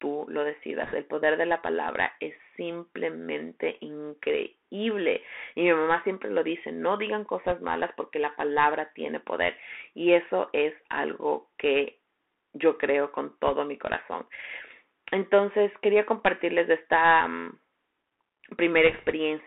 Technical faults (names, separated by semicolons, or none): Bluetooth CVSD headset codec; bit errors on a Bluetooth voice link